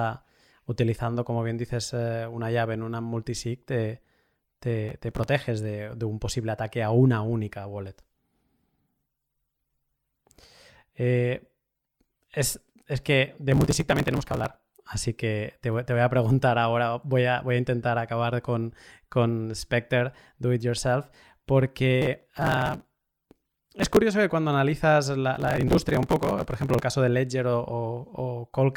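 The processor fell behind on its very short audio buffers, around a millisecond and a half each, missing dozens to a couple of hundred deadlines in a row and skipping each one. This processor overload crackle leaves a rapid string of hard-edged gaps in the speech, heard as gritty tearing from 4.89 to 5.29 s, from 13.52 to 14.46 s after "es que de", from 22.02 to 23.97 s before "que cuando", and from 25.35 to 26.82 s before "caso de".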